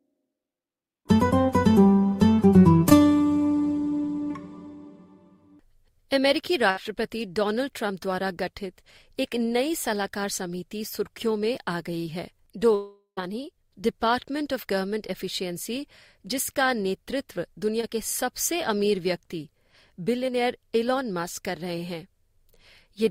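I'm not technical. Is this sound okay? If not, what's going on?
No, it isn't quite okay. There are a few short hiccups where bits of audio went missing on the way and the playback patched over them.

The smallest are short concealed packet losses, at 2.89 to 2.93 s and again at 17.81 to 17.85 s. Each time about 20 ms of audio never arrived, and the receiver stretched the sound just before it to cover the hole. You hear a tiny smear or wobble.

At 6.71 to 6.79 s there's a burst of packet loss, a few missing pieces in a row, about 60 ms in all. The last bit of sound gets held briefly as a buzz or hiss, then playback jumps ahead with that moment skipped.

The biggest one is at 12.75 to 13.19 s. The sound hangs and fades for a moment, goes quiet for about a tenth of a second, then picks up again with nearly half a second gone. That's likely a long network dropout.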